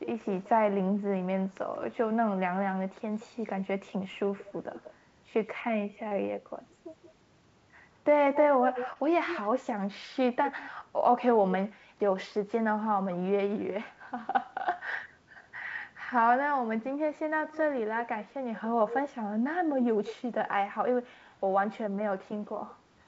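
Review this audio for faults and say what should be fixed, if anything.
Echo leak, 0.04 to 13.17 s and again 17.15 to 20.16 s: a delayed copy of the speech trails the original by about 181 ms and then 185 ms, roughly 10 dB quieter. This is likely a far-end loudspeaker feeding its microphone, with the echo canceller letting the residue return. Use headsets on the far side, or give its echo canceller a correct reference and delay estimate.

Short concealed packet loss, 6.08 to 6.14 s and 8.93 to 8.98 s: each time about 30 ms of audio failed to reach the decoder. The receiver extrapolated the preceding sound across the gap before blending back, leaving a brief smear or wobble. Improving network stability or enabling forward error correction on the call link would help prevent this.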